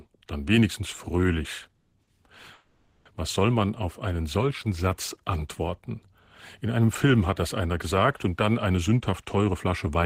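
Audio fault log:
1.75–1.93 s and 2.53–3.06 s, call audio freeze: right after "dann wenigstens fröhlich" the last sound hangs on as a fading buzzy hiss for about 170 ms, and later for about 520 ms, without dropping to silence. The sound then resumes exactly where it stopped, with nothing lost. This is likely delayed packets draining the jitter buffer, with the receiver extending the final sound until they arrived. Each freeze adds its own length to the delay.
2.03–2.08 s, short stall from a late packet: shortly after "dann wenigstens fröhlich" a sound is held about 40 ms too long, with a slight buzzy dip, then carries on without a gap in content. One packet missed its playout time, the jitter buffer briefly ran dry, and the receiver stretched what it had until the packet arrived. Nothing is missing, but the delay grows by 40 ms.
8.70–10.05 s, jitter buffer speed-up: after "einer gesagt und dann" the audio runs noticeably hurried, at about 109% speed, while the pitch stays put. 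Having built up more audio than its target, as when delayed packets arrive together, the buffer trims itself by cutting many tiny pitch-period slices in quick succession. Together they remove roughly 150 ms, which compresses the timing rather than shifting the pitch.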